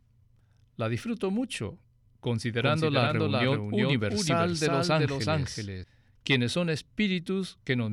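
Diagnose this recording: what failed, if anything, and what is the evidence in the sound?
A doubled audio track runs from 2.62 s to 5.84 s. Each phrase is heard twice. A second full-band copy trails the original by roughly 400 ms, about 5 dB quieter. It carries no decay or room colour, so it is not an echo. It starts and stops abruptly at those times. The likely cause is the speech being picked up again through a slower capture path, or an edit that left two copies out of step.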